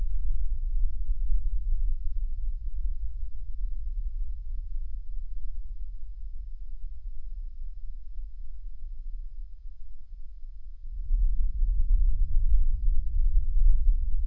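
From start to finish the sound plays back at one third of its proper speed and about 19 semitones low. That points to wrong sample rate: 48 kHz material read out at 16 kHz without conversion. On a spectrogram every frequency sits at a third of its height, and the waveform's events are stretched to three times their length.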